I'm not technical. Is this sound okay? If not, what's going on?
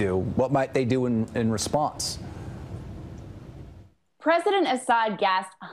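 Yes, this sound is okay, and nothing is going on that needs fixing.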